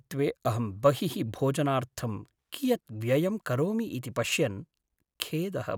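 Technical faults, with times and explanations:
No technical faults can be heard in this speech recording, and the signal stays intact from the first moment to the last.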